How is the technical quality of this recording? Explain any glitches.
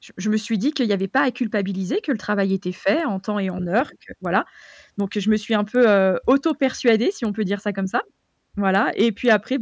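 The speech carries a steady ticking artefact from start to finish. Resampler restarted on every block, throughout: the conversion from 44.1 kHz to 16 kHz was done in separate 250 ms blocks, so each block edge lacked its true neighbouring samples. That leaves a small error at every boundary, heard as regular ticks at 4 per second while signal is present.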